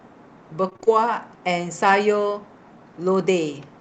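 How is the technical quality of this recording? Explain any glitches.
The recording has one clear glitch early in the speech, with the band-limiting of a call codec audible throughout, as the top end stops around 8 kHz, which fits Opus at a modest bitrate.

Repeated packet loss (robotic sound) runs from 0.69 to 0.88 s. Several short holes, the longest about 25 ms, are patched by extending the preceding sound, so nearly half that stretch is synthetic fill. The result is a brief choppy sound with fragments missing.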